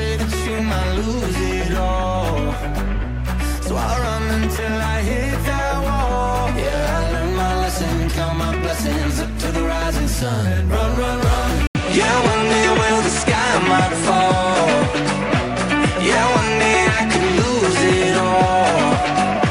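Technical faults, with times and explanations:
11.67–19.51 s, input switched to a poorer device: after an 80 ms gap, the sound dulls, with nothing above 10.5 kHz and faint new background noise, likely another microphone taking over.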